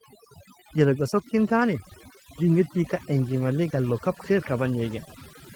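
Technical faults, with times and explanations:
Throughout: overdone noise removal. The denoiser is pushed way too hard, so any band sitting near its noise estimate gets clamped down or dropped, taking the softer parts of the speech with it. That leaves a lowered background broken into twinkly specks.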